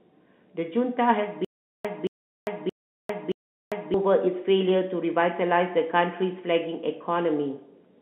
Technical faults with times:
1.45-3.94 stutter with silent gaps

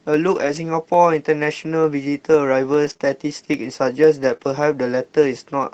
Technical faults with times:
0.14-5.74 periodic USB or driver dropouts
0.35-0.57 lost packet rebuilt from error correction
2.85-4.47 scattered short gaps

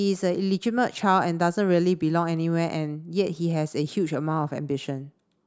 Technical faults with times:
none

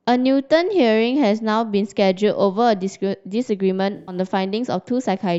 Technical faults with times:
3.96-4.15 corrupt frame concealed

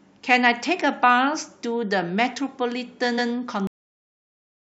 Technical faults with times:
3.17-3.31 repeated frames
3.67-4.79 cut-off end

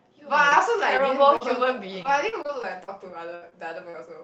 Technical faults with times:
0.49-0.53 short concealed packet loss
0.97-1.00 short concealed packet loss
1.36-1.42 short concealed packet loss
2.02-2.90 repeated packet loss (robotic sound)
3.36-3.44 burst of packet loss
3.50-3.53 short concealed packet loss
3.89-3.96 short concealed packet loss

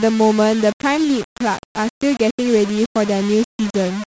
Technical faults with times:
0.00-4.11 low bit depth without dither

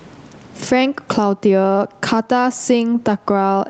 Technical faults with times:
0.00-3.69 gain pumping

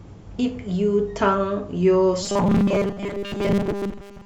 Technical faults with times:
2.23-4.26 robotic sound from repeated short buffers

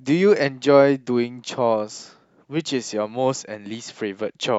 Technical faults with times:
none

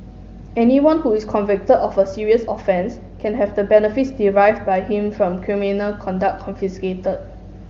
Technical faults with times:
2.66-5.27 channel delay (comb filtering)

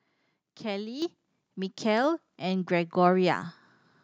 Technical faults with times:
1.02 microphone volume stepped up

